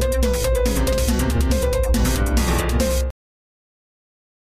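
At 3.10 s the audio has a cut-off end. The sound stops mid-event and falls straight to digital silence, with no natural decay. The final buffers were never written or played out, so nothing follows. Silence holds from there to the end.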